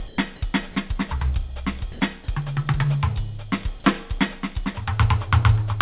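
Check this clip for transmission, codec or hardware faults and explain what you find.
Two brief gaps in the music point to sound dropped by the voice detector, the likely cause. At 0.08 to 0.18 s and again at 1.92 to 2.0 s, the sender's detector treated the music as background and stopped transmitting, and the receiver filled in comfort noise. About 40 ms and 30 ms of actual music go missing, replaced by steady noise or near silence until sending resumes. The narrow band, with nothing above 4 kHz, fits a G.711 call path at 64 kbps.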